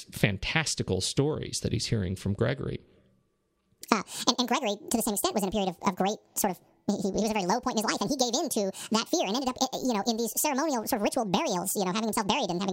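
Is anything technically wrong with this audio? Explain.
Yes. From 3.81 s to the end, a section of the speech plays at the wrong speed, about 1.71 times too fast. Pitch and tempo jump together at that moment, so the voice becomes hurried and high, raised by roughly ten semitones, almost an octave. The likely cause is a resampling or clock mismatch in playback or editing. A pitch-shift fault would raise the voice without hurrying it, and a time-stretch would hurry it without changing pitch; here both change at once.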